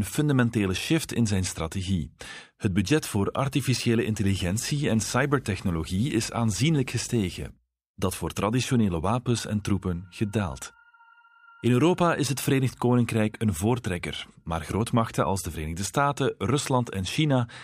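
From 4.29 to 7.50 s, right after "budget voor artificiële", video or display buzz cuts into the speech. A screen or video cable is leaking into the audio path. The result is a buzz at the 50 Hz field rate, with a gritty hash sitting above it. A thin, piercing tone at 15.6 kHz rides on top, which fits the line rate of a 625-line picture. The interference sits roughly 20 dB below the speech.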